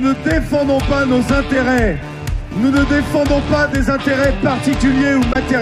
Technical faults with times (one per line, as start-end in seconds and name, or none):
5.32-5.36 damaged data in a compressed stream